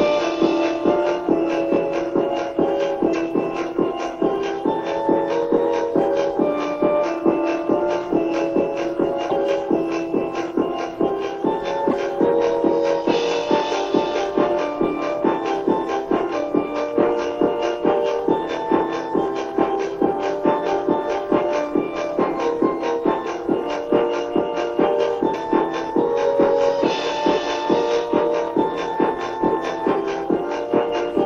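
The audio jumps forward three times, leaving a brief garbled patch of about 30 ms at 3.12–3.15 s, 9.29–9.32 s and 11.90–11.93 s, likely a broken MP3 bit reservoir: after a cut, the next 26.1 ms frame reaches back for borrowed bytes and decodes the wrong data. At 25.33 s a different fault, compressed frames skipped, drops about five frames, roughly 150 ms of audio, leaving only a smeared blip where overlapping frames blend. It differs from the reservoir fault in that no corrupted material is decoded afterwards.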